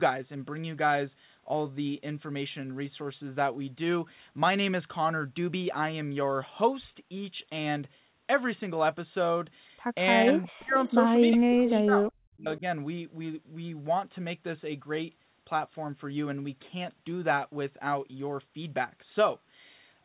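Between about 10 and 13 seconds of this speech recording, the far end's echo canceller most likely failed to remove everything its loudspeaker fed back into its microphone. This echo leak returns a copy of the speech 363 ms late in short scraps at 10.34–10.44 s, 10.87–10.94 s, 11.31–11.36 s, 11.65–11.74 s and 12.56–12.60 s, at about 30 to 10 dB below the direct speech. Over the same stretch, the canceller most likely mistook overlapping talk for echo and turned the local speech down, causing speech suppressed in double talk. The speech dips by up to about 40 dB or drops out in pieces at 10.47–10.75 s, 11.36–12.05 s and 12.30–12.63 s.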